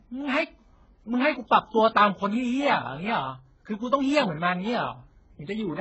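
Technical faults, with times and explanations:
Throughout: transcoding between lossy codecs. Nothing above about 8 kHz survives, so the speech sounds dull and boxed-in, and on top of that there's a layered quality: the first codec's artefacts heard together with a second codec's own artefacts. That's likely a very low-rate HE-AAC encode, around 8 kbit/s, re-encoded to AAC-LC at roughly 24 kbit/s, where the second pass wastes bits on the first pass's damage, adds its own, and keeps the lower cut-off.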